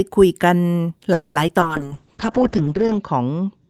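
At 1.13 s the speech hangs for about 220 ms, to 1.37 s. The last sound stretches into a fading buzz, then picks up exactly where it stopped. That's a call audio freeze, likely from packets stalling until the jitter buffer ran dry. Nothing is lost, but everything after it lands about 220 ms late.

Right after, there are two quick glitches of short concealed packet loss, at 1.47 s and 1.60 s, each about 30 ms. Roughly 20 ms of real audio never arrived in time, so the receiver patched over it by extending the previous sound and blending back. You hear a tiny smear or wobble each time.

From 1.67 s on, there's a call bitrate drop. The encoder gets squeezed from 40 kbps down to 7 kbps, and it sits at the bottom for about 1.3 s. The audible bandwidth falls from 20 kHz to 8 kHz, so the speech goes muffled and a bit watery through to the end.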